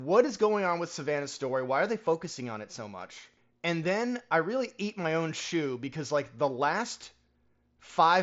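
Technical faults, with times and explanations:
No technical faults detected.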